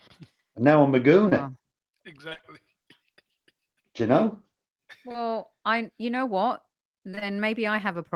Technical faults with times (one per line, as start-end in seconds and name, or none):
1.29-1.33 short concealed packet loss
2.29-2.45 repeated packet loss (robotic sound)
5.09-5.23 short concealed packet loss
7.11-7.23 short concealed packet loss